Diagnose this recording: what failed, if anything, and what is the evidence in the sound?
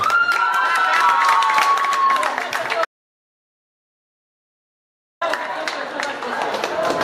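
An audio dropout to silence runs from 2.85 s to 5.21 s, removing about 2.36 s of material. The sound stops abruptly mid-flow and returns just as suddenly, with no room tone or noise floor in between. On a waveform it is a flat line; on a spectrogram, a dark band across all frequencies. The capture stage is the likely cause, with the input lost while the recorder kept writing digital zeros.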